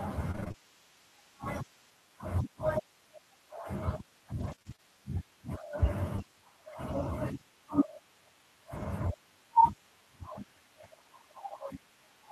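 Repeated packet loss (robotic sound) hits this speech recording at 0.31 to 0.56 s: six gaps up to 24 ms each are patched by extending the previous sound, so about half that stretch is synthetic and choppy. It returns at 4.40 to 4.80 s with four gaps, about a tenth of a second filled in. Short concealed packet loss at 6.16 to 6.20 s leaves a 20 ms smear where the decoder continued the last sound before blending back. Within it, a lost packet rebuilt from error correction at 6.18 s comes from a low-bitrate copy carried in the next packet, so that 20 ms is rougher and noisier, not silent.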